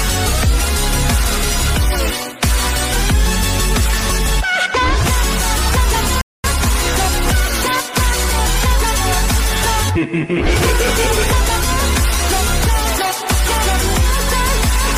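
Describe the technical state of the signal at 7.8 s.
At 7.8 s the signal is intact, with no audible dropout, distortion, glitch or other technical fault at that moment.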